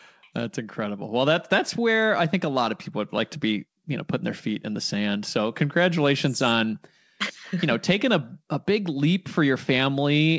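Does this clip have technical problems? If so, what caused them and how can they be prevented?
No, nothing stood out on listening to this speech clip, which has the restricted top end of a wideband call path with no content above 8 kHz.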